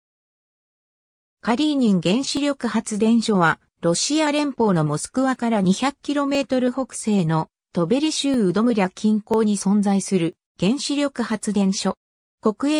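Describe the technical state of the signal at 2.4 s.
An overlap between stream segments occurs at 2.37 s. The timestamps of two roughly one-second segments claim the same stretch, so the player discards about 18 ms of sound that was never duplicated. The waveform jumps across the gap, heard as a brief click or skip.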